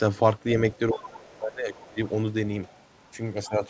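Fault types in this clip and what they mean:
speech suppressed in double talk: the speech sinks as much as about 25 dB near 0.93–1.99 s and briefly at 3.47 s, likely echo-canceller ducking, unlike a dropout's abrupt silence.
other side's voice leaking through: faint scraps of a second voice, about 25–30 dB under the speech, five times between 0.95 and 2.85 s, likely residual loudspeaker echo rather than noise.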